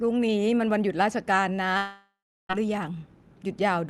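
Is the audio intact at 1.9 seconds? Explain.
No. From 1.77 to 2.51 s, a likely long network dropout lost about 0.72 s of speech. A fading buzz continues the last sound, then silence follows.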